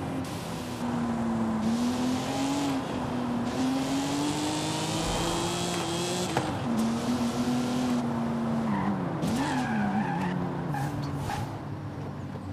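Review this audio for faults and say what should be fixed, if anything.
From 10.77 to 12.53 s a gritty, inharmonic fizz rides on loud and bright passages, roughly 30 dB down. This is crude rate conversion: samples dropped or repeated without filtering, which fits a 48 kHz to 44.1 kHz change. Use a properly filtered, band-limited resampler for any rate conversion.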